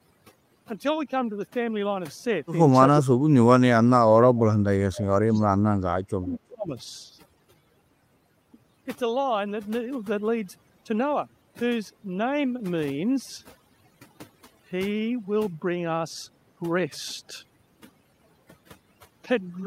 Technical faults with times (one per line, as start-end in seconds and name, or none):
0.00-19.66 overdone noise removal
3.01-3.67 speech suppressed in double talk
4.30-5.48 speech suppressed in double talk
5.86-6.72 speech suppressed in double talk